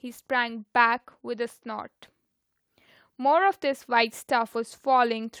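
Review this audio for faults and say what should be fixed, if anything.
From 2.98 s to 5.34 s there's automatic gain rising: the AGC decided the input was too quiet and pushed its gain up about 3 dB, so the speech and the background swell together. Setting a fixed input gain and disabling the AGC would prevent it.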